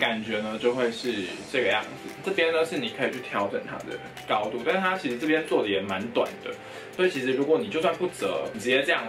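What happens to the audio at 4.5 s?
Nothing goes wrong at 4.5 s; the audio plays through that moment intact, with no dropout, click or other fault.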